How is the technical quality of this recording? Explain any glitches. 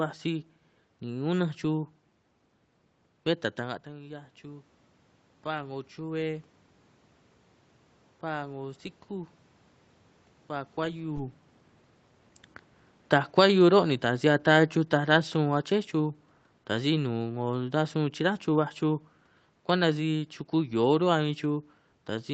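The recording has two automatic gain control faults.

From 3.57 to 6.53 s, automatic gain rising: after the talker moves back around 3.5 s and the input falls about 13 dB, the control lifts its gain about 5 dB, so voice and room noise swell together.

From 13.17 to 17.12 s, automatic gain falling: the control lowers its gain about 4 dB, and the voice and background sink in step. A talker moving would change only the voice.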